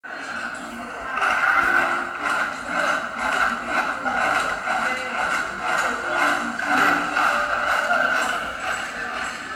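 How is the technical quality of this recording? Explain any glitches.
No technical glitches can be heard in this recording of sounds. There is nothing here that needs explaining.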